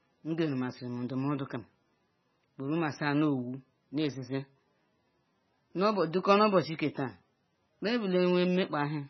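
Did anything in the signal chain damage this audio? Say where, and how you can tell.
Yes. The damage comes from the codec stage, and the culprit is likely MP3 compression at a starved bitrate. Across the whole speech clip nothing survives above 6 kHz, a hard shelf where the encoder discarded the treble. Below that, the codec damage is heavy: weak spectral lines dropped in and out between frames, giving the speech a watery, swirling texture and smeared consonant onsets. Together these point to a bitrate around 16 kbps.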